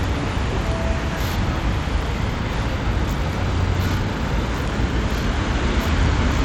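From the start to the end, the whole clip carries plainly audible damage, and it sounds like Bluetooth SBC compression, likely at a low setting, which fits a bitrate of around 96 kbps. The top end keeps dropping out and flickering back as the upper bands get starved of bits, while a gritty, grainy noise and some aliasing cling to everything underneath. With no hearing model deciding what matters, the sounds here just come out coarse.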